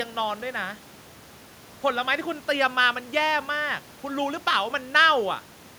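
No technical faults can be heard in the speech, and the only other sound is the room's own background noise, sitting about 26 dB below the voice.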